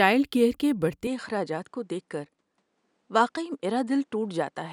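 The input likely switched to a poorer device at 1.07 s, and that device carries the speech to the end. Nothing above 10.5 kHz survives, so the tone dulls abruptly without any gap or level change, and a faint new noise floor, about 50 dB down, appears.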